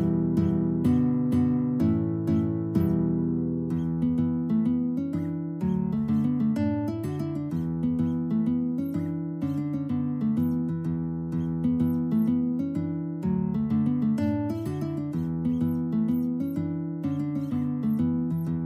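Nothing technical stands out here: the audio runs along without a single glitch, dropout or odd artefact to point at.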